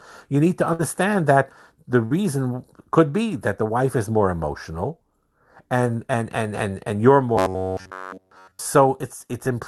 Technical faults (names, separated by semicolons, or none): burst of packet loss; robotic sound from repeated short buffers